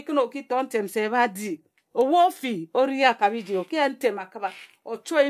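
No technical faults are audible.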